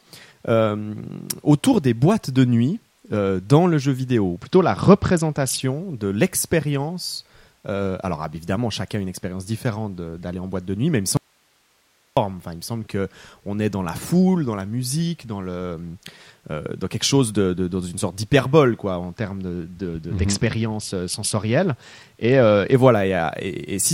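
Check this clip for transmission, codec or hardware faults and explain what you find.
Two kinds of fault are present in this speech clip: Bluetooth SBC bit pool drops on two occasions, and one audio dropout to a faint residue.

The SBC bit pool drops run from 4.35 to 5.61 s, after "dans le jeu vidéo", and from 19.06 to 22.74 s, after "une sorte d'hyperbole quoi". Link congestion forced the encoder to spend fewer bits, consistent with a fall from a bit pool around 31 to about 9, roughly 72 kbps. The treble dulls and grit appears. On a spectrogram, the upper bands thin abruptly while the noise floor rises.

The audio dropout runs from 11.17 to 12.17 s, about 1 s, starting after "nuit mais il me". The speech cuts out abruptly, leaving only hiss about 40 dB down, most likely because the signal was lost while the downstream path stayed live. The waveform collapses to a thin, flat band of noise with sharp edges.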